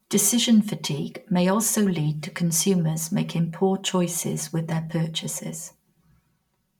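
From start to finish the speech carries channel delay, heard as comb filtering. One channel arrives about 5 ms behind the other. When the two are summed to mono, matching content cancels at evenly spaced frequencies. The first notch sits around 100 Hz, and further notches repeat up the spectrum. The notches stay fixed because the delay never changes. The result is a hollow, phasey tone.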